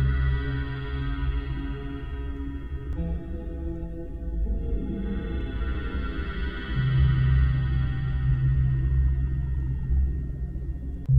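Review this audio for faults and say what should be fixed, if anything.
Two short bursts of damaged data in a compressed stream, at 2.93–2.98 s and 8.50–8.56 s, each about 50 ms long, are heard as brief disruptions breaking into the sound. At each point some bytes of the encoded stream were lost, zeroed or overwritten, so the decoder misread those frames, lost sync and resynchronised at the next valid frame header. Fix this by re-fetching the file from a clean source and verifying transfers with checksums or CRC-protected frames.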